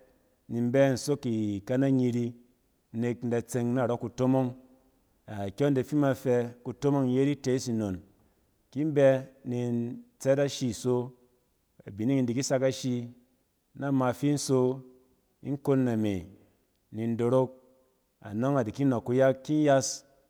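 No technical faults can be heard anywhere in the speech, so there is nothing to describe in time order.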